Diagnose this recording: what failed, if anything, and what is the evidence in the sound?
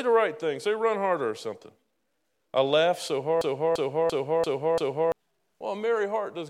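Right after "I laughed so", from 3.41 to 5.12 s, the same 341 ms slice of speech repeats five times in a stuttering loop at about 2.9 Hz, and roughly a second and a half of audio is lost. This is a system hang loop at the driver or buffer stage: the host froze while the hardware kept replaying its ring buffer, which fits a 16384-sample buffer.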